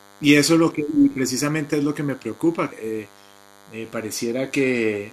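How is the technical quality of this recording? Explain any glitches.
Two things stand out in the speech: a constant buzz underneath everything, and one short glitch near the middle.

The buzz runs the whole way through and is DECT cordless phone buzz. A DECT handset or base station nearby fires a radio burst every 10 ms. The audio circuitry picks that up and rectifies it, so you get a 100 Hz repetition rate. It comes across as a thin, steady, slightly rasping hum with lots of harmonics. It sits fairly low, roughly 30 dB under the speech.

The glitch is damaged data in a compressed stream, running from about 2.68 to 2.72 s. Some of the encoded data there was corrupted, so the decoder couldn't read those frames properly and had to hunt for the next valid frame header before it could carry on. What you hear is a brief glitch, roughly 40 ms long, breaking into the audio.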